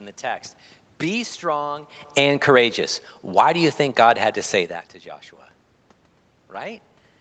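Speech, with automatic gain falling between 2.02 and 2.51 s: the gain control judges the input too loud or its background noise too strong and pulls it down about 4 dB, so the waveform envelope and its background noise shrink together.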